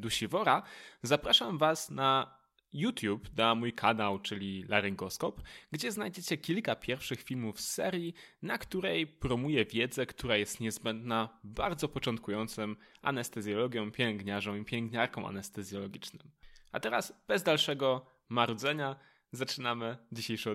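No technical faults can be heard anywhere in the speech. There is no moment in the recording that calls for a timestamp or a description of damage.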